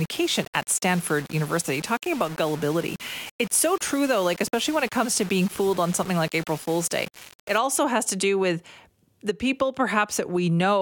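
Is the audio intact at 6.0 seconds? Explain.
No. At 6.0 seconds the speech is still inside a stretch of low bit depth without dither, running from 0.0 to 7.58 s. It sounds grainy and gritty, with distortion that shifts with the voice and sits only about 20 dB below it. The likely cause is rounding to about 5 bits with no dither, so the error follows the signal.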